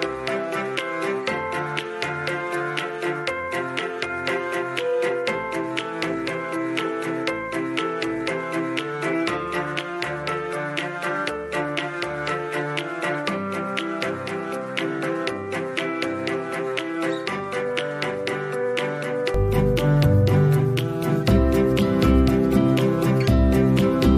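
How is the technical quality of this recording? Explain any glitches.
Quality's decent but uneven. From the start to 19.34 s the sound is duller, with nothing above 11.4 kHz, a few dB quieter, and carrying a faint extra hiss. That likely comes from the input switched to a poorer device, whose narrower band and own noise color everything until it flips back cleanly, with no gap.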